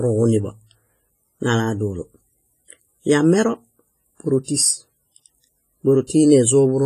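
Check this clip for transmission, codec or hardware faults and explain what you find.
Two codec faults are audible in the speech: heavy transform-coding damage across the whole clip, and one pre-echo near the end.

WMA compression, throughout: the likely cause is a WMA 1 encode at a low rate, which fits roughly 24 kbps. Such a coder splits the signal into long blocks of frequency lines and quantises them coarsely, letting the noise smear across tens of milliseconds and zeroing weak lines. Here the damage is heavy. The speech rings and sounds washy, with hiss that swells and falls with the signal, and nothing remains above 15.5 kHz.

Pre-echo, from 6.07 to 6.10 s: a sharp onset lands late in a transform block, so quantisation noise sized for the loud attack is spread back over the quiet stretch before it. The noise spreads about 27 ms ahead of the onset, heard as a brief hiss leading into the attack, which sounds softened and smeared rather than crisp.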